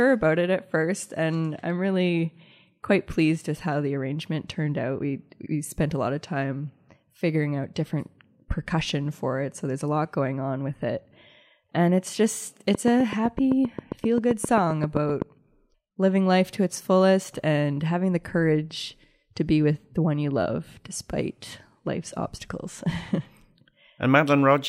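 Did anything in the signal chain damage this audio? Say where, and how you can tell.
Yes. A train of clicks runs from 12.75 to 15.23 s, starting right after "it's just". About twenty similar pulses tick at a steady 7.7 per second and peak about 15 dB above the speech. The likely cause is nearby equipment injecting interference into the analogue wiring.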